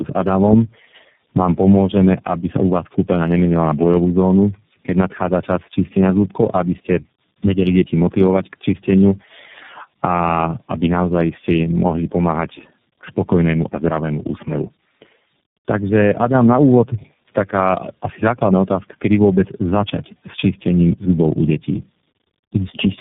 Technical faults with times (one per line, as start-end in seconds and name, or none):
0.00-23.00 tandem speech coding